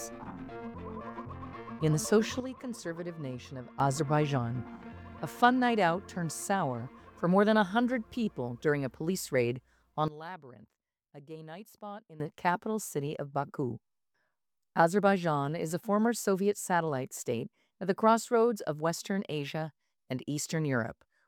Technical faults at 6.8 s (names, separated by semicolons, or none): none